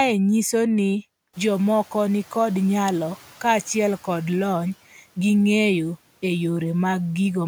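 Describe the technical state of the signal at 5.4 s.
At 5.4 s the signal is intact, with the room's background noise sitting about 29 dB below the speech as part of the recording itself.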